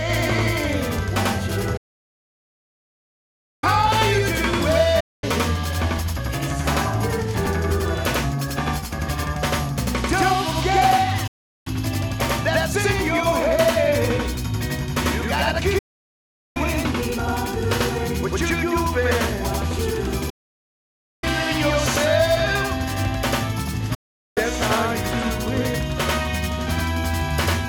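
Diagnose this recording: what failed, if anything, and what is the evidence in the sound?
Throughout the recording every sound is followed by a second copy about 93 ms later at the same level, heard as a slap-back doubling. This is a channel delay (doubling) fault in the driver or buffer stage. One channel of the stereo pair arrived a full buffer late, and both were then summed to mono. The late copy therefore sits apart from the original instead of blending with it, and the offset fits a 4096-sample buffer.

The audio also suffers a digital broadcast dropout, a reception fault in the broadcast link and receiver. It fades to silence in about 8 ms at 1.77–3.64 s, 5.00–5.24 s, 11.27–11.67 s, 15.78–16.57 s, 20.30–21.24 s and 23.94–24.38 s. The holes last from 0.24 s to about 1.86 s. The receiver muted while frames were missing or failed their checks, so the programme resumes further along rather than where it stopped.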